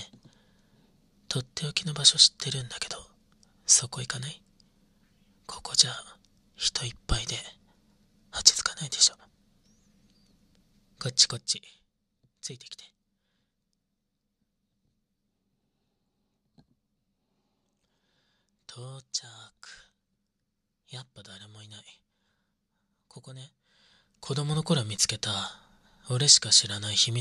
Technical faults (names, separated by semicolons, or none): zipper noise